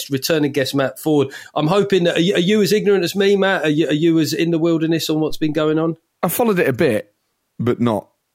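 A phantom power thump sits at 5.30 to 5.65 s: a supply switched on a live input sends a step through the coupling capacitors, giving a deep thump peaking around -18 dBFS and decaying in about 78 ms.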